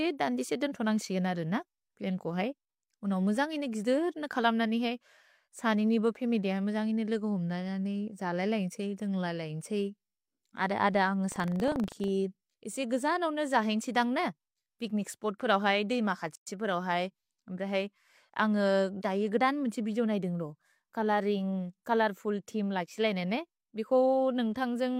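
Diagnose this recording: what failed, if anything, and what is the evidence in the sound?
Buffer tearing from 11.28 to 12.09 s, at the driver or buffer stage: a rattling buzz at 25 Hz, which fits a 40 ms period. The writer and the hardware reader have slipped, so a small slice of each period replays audio from roughly 70 ms earlier.

A gap at a join of encoded pieces at 16.35 s, from the codec or storage stage: a 115 ms gap with smeared edges cuts into the speech, which then resumes where it stopped. Separately encoded segments were joined with their start delay and end padding left in.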